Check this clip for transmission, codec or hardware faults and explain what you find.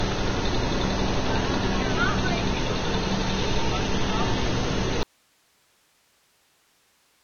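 Three faults are present: grainy quantisation distortion and heavy codec damage throughout, plus a dropout from 5.03 s to the end.

Low bit depth without dither, throughout: the audio sounds rough and gritty, with a distortion that rises and falls with the sound itself. The likely cause is rounding to only about 5 bits with no dither, leaving error only about 15 dB below the signal. On a waveform the trace shows visible stair-steps.

Vorbis compression, throughout: nothing is present above 6.5 kHz, and what remains is hissy and smeared, with blurred attacks and roughened tones. This fits a likely heavily squeezed Vorbis encode around 20 kbps, where coarse quantisation turns fine detail into noise. A spectrogram shows a hard ceiling at 6.5 kHz with blotchy texture beneath.

Audio dropout to a faint residue, 5.03 s to the end: the sound cuts off abruptly rather than fading, leaving only a low hiss far below the earlier level, around 40 dB down. 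This points to a likely loss of the signal while the downstream path stayed live. On a waveform the envelope collapses at once to a thin noise band.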